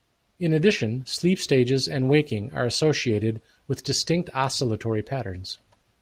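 No technical faults are audible.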